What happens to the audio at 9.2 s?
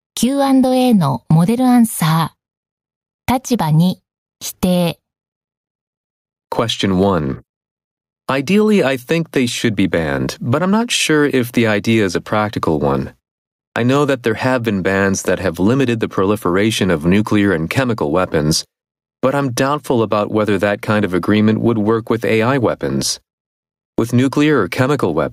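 At 9.2 s the speech is caught in gain pumping that runs through the whole clip. The gain swings by around 10 dB, pulled down under loud syllables, likely from overdriven input gain and a fast limiter. The waveform looks flattened.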